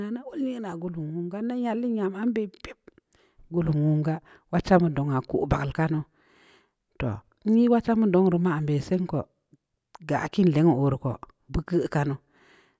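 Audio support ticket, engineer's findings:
No audible faults found in the speech recording.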